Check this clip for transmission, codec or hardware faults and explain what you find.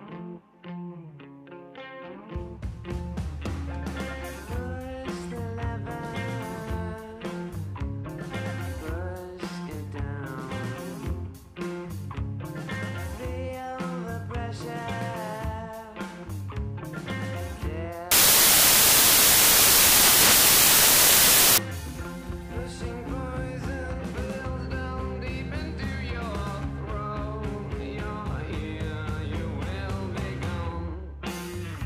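One fault stands out, affecting a section of about three and a half seconds. From 18.11 s to 21.58 s, the samples are built from the wrong bytes. The reader assembles each sample incorrectly, either misaligned by a byte or with the byte order swapped. The rapidly changing low bits then land in the most significant position. That turns the audio into loud, harsh broadband noise.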